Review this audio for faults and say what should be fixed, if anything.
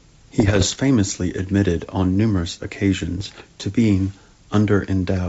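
Bit errors on an ADPCM link show up from 0.40 to 0.77 s and again from 3.18 to 3.42 s as pops and rough, gritty bursts with brief level jumps. Each flipped bit throws off the decoder's step size and predictor, so the damage rings on rather than clicking once. The rate sounds like one to two percent of bits. The clean wideband sound around these bursts fits G.722 at full rate. To prevent it, add error protection or concealment on the link, or fix whatever is corrupting the channel.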